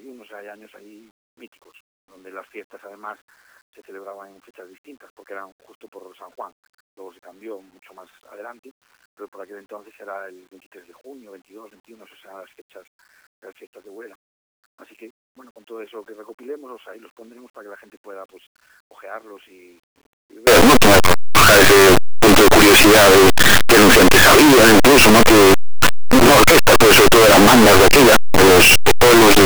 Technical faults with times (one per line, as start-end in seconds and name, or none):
20.47-29.45 signed and unsigned mixed up